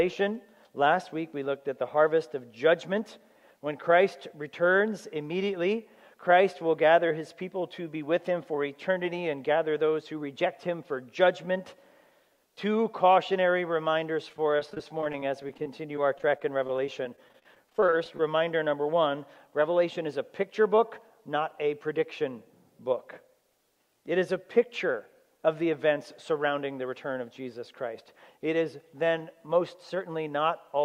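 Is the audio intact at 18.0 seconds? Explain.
No. Repeated packet loss (robotic sound) runs from 14.29 to 18.20 s. Dozens of short gaps, none longer than 31 ms, are each patched by stretching the preceding sound, giving choppy, robotic audio with fragments missing.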